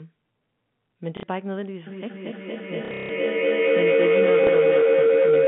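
Packet loss with the last packet repeated first appears at 1.17 to 1.23 s, where 60 ms of audio goes missing. The receiver plays the previous chunk twice instead of the lost speech, giving a brief robotic stutter. The size of the gap fits two 30 ms packets.

A feedback howl begins at 1.87 s and runs to the end of the clip. Two devices in the same room are on the call, so sound travels from loudspeaker to microphone and back with more gain on every pass. The tone grows rather than dying away and narrows to around 500 Hz, peaking about 9 dB above the speech and pulsing roughly every fifth of a second, the round-trip delay of the loop.

Under the howl, the packet loss returns much more heavily between 2.85 and 3.09 s. About 210 ms is lost across that 240 ms span, with the longest run lasting 150 ms. That run buzzes at the packet rate, near 33 Hz. A last single dropout of 30 ms follows at 4.44 s. 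All of it sits inside the narrow telephone band of the G.711 line.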